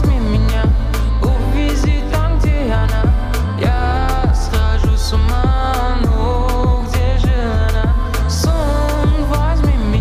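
Nothing stood out as a technical problem on listening to this audio.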